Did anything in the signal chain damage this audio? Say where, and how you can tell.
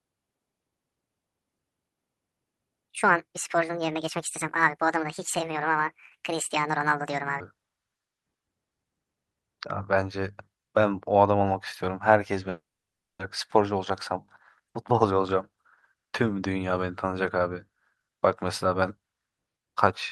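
Yes. Playback or editing stage: from 0 to 7.4 s the speech runs 1.6 times fast and about seven semitones high, a section at the wrong speed, likely from resampling to the wrong clock.

Network stage: a long network dropout from 12.49 to 13.23 s. The last sound is stretched into a fading buzz or hiss, then silence. About 0.4 s of speech is likely lost in transit.

Jitter buffer stage: jitter buffer speed-up from 13.55 to 14.14 s at 110% and 14.60 to 17.05 s at 109%. Pitch holds while delivery hurries, as pitch-period pieces are cut to drain the backlog.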